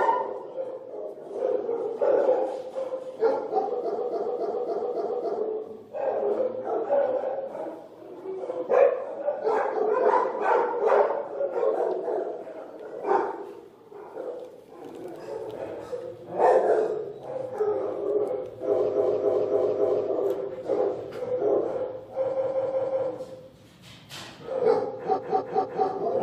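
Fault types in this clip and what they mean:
Repeated frames: at 3.97–5.37 s, 18.93–20.04 s, 22.32–23.06 s and 25.15–25.85 s, a short block of compressed audio is decoded again and again, producing a mechanical stutter. The looped block lasts 278.6 ms in the first two runs, then 185.8 ms and 232.2 ms, and plays 3 to 5 extra times. Each run lengthens the clip by 0.7 to 1.4 s.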